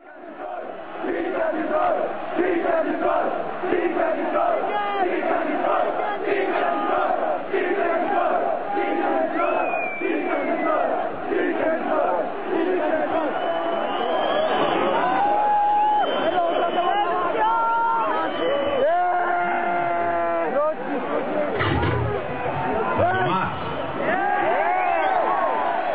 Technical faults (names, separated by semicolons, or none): none